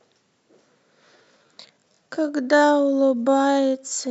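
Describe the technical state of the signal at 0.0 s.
At 0.0 s the speech signal is intact, with no technical fault present at that moment.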